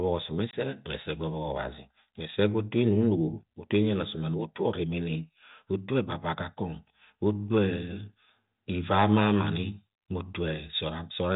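At 0.51 to 0.54 s the speech drops into a hard-edged hole of about 20 ms, packet loss on an ADPCM call, probably a couple of packets. The decoder's adaptive predictor and step size drift from the sender's, so the speech resumes briefly slightly distorted over the 32 kbit/s G.726 link.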